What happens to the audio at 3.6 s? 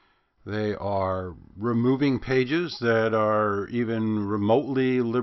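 Nothing goes wrong at 3.6 s: the speech continues intact through that moment, with no dropout, click or distortion.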